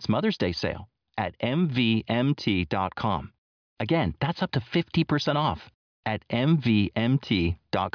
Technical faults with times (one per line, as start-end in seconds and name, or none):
none